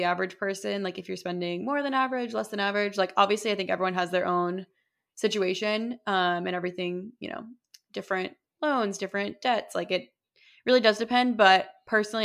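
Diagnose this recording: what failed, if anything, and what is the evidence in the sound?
Nothing in the recording points to a failure at any stage, from analogue wiring and conversion through buffering, processing, transmission or storage to playback.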